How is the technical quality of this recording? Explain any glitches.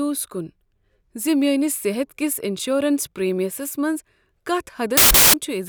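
One glitch stands out: from 4.97 to 5.34 s the speech turns into loud, harsh broadband noise, caused by samples built from the wrong bytes. The reader assembled each sample with misaligned or swapped bytes, so the rapidly changing low bits became the dominant part of every value. Unlike clipping or crackle, the result is noise rather than distorted speech.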